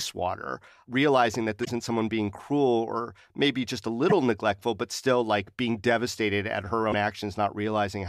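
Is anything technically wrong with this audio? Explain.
Yes. Damaged data in a compressed stream causes three short chirps or blips: at 1.61–1.69 s after "water realizing that", at 4.09–4.12 s after "or maybe just a", and at 6.89–6.94 s after "like being devastated at". Corrupted bytes make the decoder misread those frames and lose sync until it finds the next valid one.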